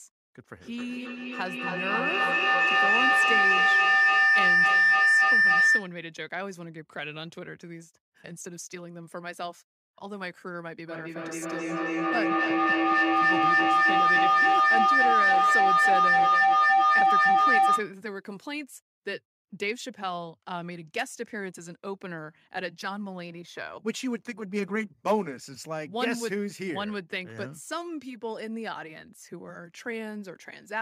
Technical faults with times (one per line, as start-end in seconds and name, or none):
0.61-6.01 feedback howl
10.87-18.00 feedback echo between two devices